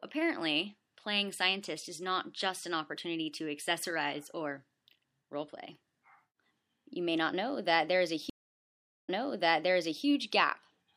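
At 8.30 s the sound drops into about 0.78 s of silence, then resumes roughly 0.97 s earlier, repeating material until 10.05 s. This is a stream reconnect: the connection broke, a fresh decoder started mid-stream, and the server resent a burst.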